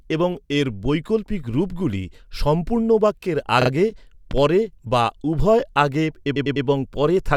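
At 3.61 s, just after "বৈকল্পিক রূপগুলি সম্পূর্ণ বাক্যের", repeated frames occur. A 40 ms stretch of the compressed stream, which fits two frames, was delivered more than once, and the decoder plays it two extra times. This is heard as a short stutter in the speech up to 3.69 s, and it pushes everything after it 80 ms later.

From 4.31 to 4.40 s, just before "বা উভয় আগে", a sudden electrical step or pulse entered the signal path. It was likely caused by a plug, a switch, static or a driver glitch. The result is a loud pop, actually two sharp pops in quick succession, peaking somewhat above the speech level. The speech continues underneath them.

At 6.35 s, right after "বা উভয় আগে", repeated frames occur again, this time on a larger block. A 100 ms section, which fits five frames, is played three extra times through 6.65 s. This produces a stutter and adds 300 ms to the audio.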